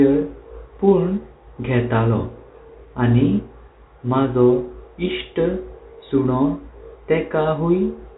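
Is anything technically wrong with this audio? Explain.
No, nothing is technically wrong.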